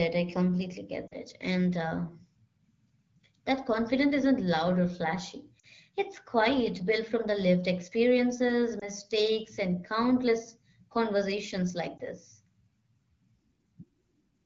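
Lost AMR speech frames: corrupted radio frames fail their checksum, so the wideband AMR decoder, whose light coding character fits about 12.65 kbit/s, repeats the last good settings. This causes drops to near silence at 1.07–1.14 s and 5.59–5.66 s, and brief dips or warbles at 8.79–8.90 s and 11.97–12.01 s.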